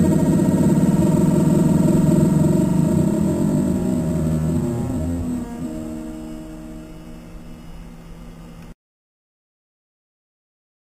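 Imaging from sample-and-hold upsampling runs throughout: repeated, unsmoothed samples leave mirrored copies at 4–8 kHz, about 25 dB down, a metallic fizz fitting an 8 kHz source.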